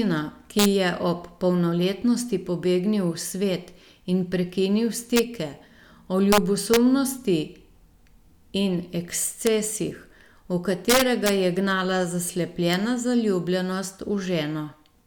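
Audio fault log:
0.59–0.66 s (before "je ob polnoletnosti pobegnil"), 5.16–5.19 s (after "svet in prekinil"), 6.32–6.38 s, 6.74–6.77 s, 9.47 s, 10.90–11.29 s (before "ga je gnala"), 12.74 s: integer overflow. Speech peaks pushed up to about 3 dB past the integer limit and wrapped to the opposite sign instead of being held at the limit. Each wrapped peak jumps across the full range, giving violent cracks far sharper than clipping, longest around 10.9–11.3 s.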